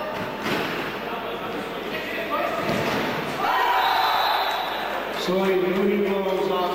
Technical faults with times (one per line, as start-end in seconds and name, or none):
0.00-6.74 mains hum